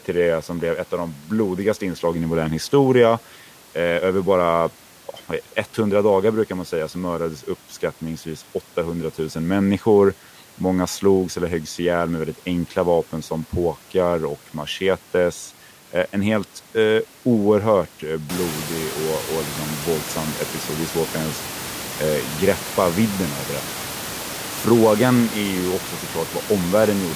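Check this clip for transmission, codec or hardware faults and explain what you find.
No transmission, codec or hardware faults found here.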